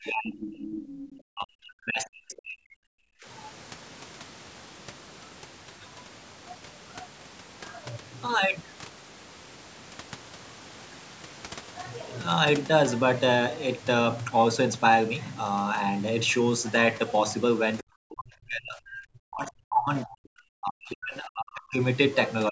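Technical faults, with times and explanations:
0.00–2.86 s, speech suppressed in double talk: the speech dips deeply, as much as about 40 dB, likely because the echo canceller ducked it while both sides spoke.
0.89–1.17 s, other side's voice leaking through: a faint second voice, about 20 dB below the speech, is likely loudspeaker echo that the canceller left in the microphone signal.
3.2 s, speech suppressed in double talk: a brief dip of roughly 25 dB, lasting well under a tenth of a second, is likely the canceller clamping down during overlapping talk.
17.82–21.80 s, speech suppressed in double talk: about four seconds of heavily attenuated speech, dropping around 40 dB at worst, likely as the canceller suppressed the talker alongside the far-end echo.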